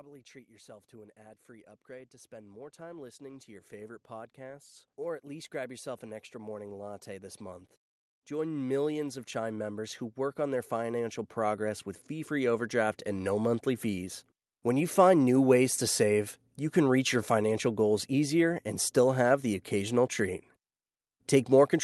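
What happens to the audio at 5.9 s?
Automatic gain rising runs from 5.26 to 7.46 s, starting just after "or at", so 5.9 s falls in the middle of it. The gain control judged the incoming level too low and eased its gain upward over about two seconds, adding about 5 dB by the end. Because the gain applies to the whole signal, the speech and the background noise beneath it swell together rather than the voice alone getting louder.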